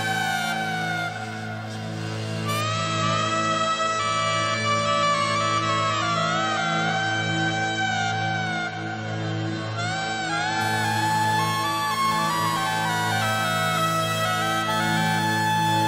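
From 2.61 s to 10.61 s, an adaptive stream at a lower bitrate cuts everything above 8.3 kHz with abrupt switches and no gap, consistent with MP3 dropping from about 128 to 32 kbit/s.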